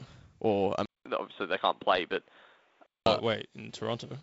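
Load changes in the computer disturb the audio ground throughout the speech, adding a faint buzz pulsing around 200 times a second, well below the speech. From 0.86 s to 3.06 s, the input likely switched to a poorer device: after a 200 ms silence, nothing passes above 3.8 kHz, so the speech sounds dull and boxy, shifts a few decibels in level and gains a quiet new noise floor.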